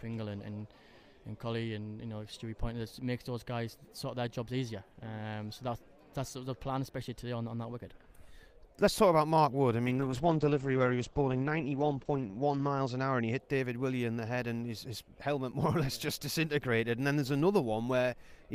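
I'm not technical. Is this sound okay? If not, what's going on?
No. From about 9.88 to 13.45 seconds there is a call bitrate drop. The connection briefly got worse, so the call squeezed the sound into far less data. For roughly three seconds it turns rough and muffled, because the crisp top end above 8 kHz is cut away. Unlike dropped audio, the sound never stops or skips; it keeps flowing, just blurrier, then clears once the connection recovers.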